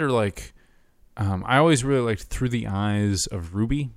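No technical faults can be heard anywhere in the recording. The speech continues without any audible problem at any point.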